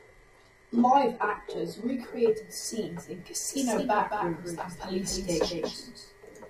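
The player of an adaptive stream began this speech on a low-bitrate version, which sounds like HE-AAC at around 16 kbit/s, before switching up. So from 0.0 to 2.0 s, just before "scenes in", the treble is thin and partly synthetic, with nothing above 11.8 kHz and stronger codec artefacts, until quality jumps abruptly with no gap. From 3.49 s, right after "scenes in", a doubled audio track appears, most likely from a second, slower capture path mixing in the same signal. A dry, full-band copy about 5 dB quieter trails the original by roughly a fifth of a second and starts abruptly, continuing to the end.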